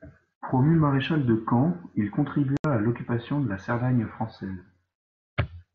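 Speech, carried over a wideband mSBC headset link that passes content up to 8 kHz, with unconcealed Bluetooth headset packet loss from 2.57 to 2.65 s: headset-to-phone voice packets went missing and nothing filled the 75 ms gap. It shows as a flat-line break in the waveform and a sharp-edged blank column across the spectrogram, with possible clicks at its edges.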